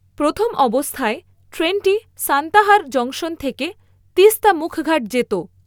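No technical faults are audible.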